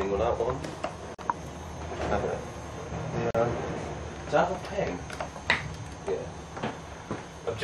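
At 1.15 s and again at 3.31 s the sound drops out for about 40 ms, a gap at a join of encoded pieces: separately encoded segments were spliced with their start delay and end padding left in. The edges are smeared, and the sound resumes exactly where it stopped, unlike a dropout that loses material.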